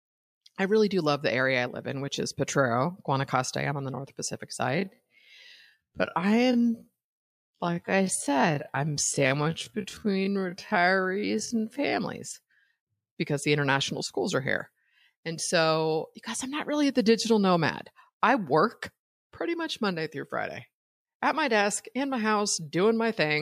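Speech, with a time-stretched section from 4.68 s to 11.96 s. There the pace suddenly drops to about 0.55 times normal speed while the pitch holds steady. The slowed passage drags. Software likely stretched it by repeating short pieces.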